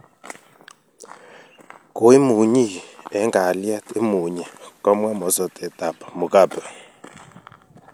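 From 2.85 to 6.09 s the receiver lost its digital stream and cross-faded over 287 ms to the FM analogue broadcast, a digital radio blending to analogue. The speech drops about 2 dB and faint hiss appears, roughly 40 dB down, until it blends back.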